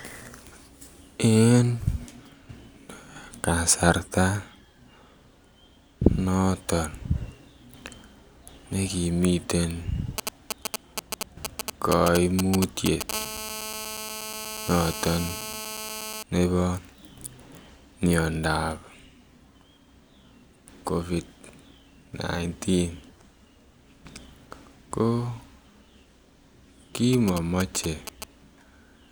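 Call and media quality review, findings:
GSM signalling bursts at 10.18–13.11 s, right after "ne kimiten", and at 27.13–28.24 s. Galloping ticks and short 217 Hz buzz groups. Roughly as loud as the speech at first, then roughly 10 dB under it later. Nearby 2G handset signalling. The audio circuit rectifies its radio bursts.

GSM phone buzz at 13.13–16.23 s. Hard, raspy, steady 217 Hz buzz with dense harmonics, unrelated to the speech, about 10 dB below it. A nearby 2G handset is in a call, pulsing 217 times a second. The audio circuit rectifies each burst.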